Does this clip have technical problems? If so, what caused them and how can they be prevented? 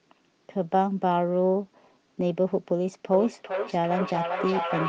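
Yes. There is feedback echo between two devices from 3.13 s to the end at 4.89 s. The speech returns as a delayed copy at a fixed interval of roughly 0.4 s. At its loudest the echo sits about 4 dB below the speech, so it is strong. Two devices in the same room are joined to one call. One plays what the other's microphone sent, and that microphone picks it up again. Each echo canceller only removes its own device's playback. To prevent it, keep only one device's microphone and speaker active in a shared room.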